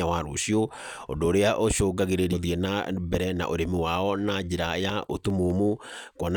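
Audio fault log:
2.32 to 2.35 s, stream segment skipped: The speech briefly breaks and jumps forward, with a small blip where the two sides of the break meet. This is most likely one segment of the stream failing to load, so the player moved straight on to the next one. Whatever that segment carried is gone. The cut is about 30 ms, so the join is abrupt and not a silent gap.
4.29 to 5.50 s, CD scratch ticks: Seven short ticks land over about 1.2 s, roughly five a second, each no more than a couple of milliseconds long. A scratch or blemish on the disc wipes out more data than error correction can rebuild, once per revolution. The player interpolates or mutes those samples, and each patch comes through as a brief click at a steady rate tied to the disc's rotation.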